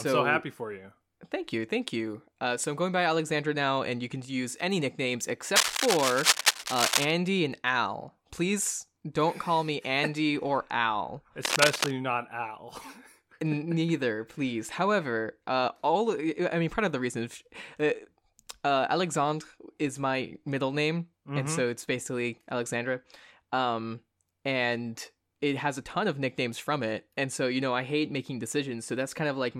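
A worn cable, connector or control was most likely being moved during this speech recording, making its contact resistance jump around and inject cable scratch noise. Dense, uneven bursts of scratching and rustling sit over the speech at roughly the same loudness, first from 5.56 to 7.11 s, just after "can use any nicknames", then again briefly from 11.43 to 11.91 s.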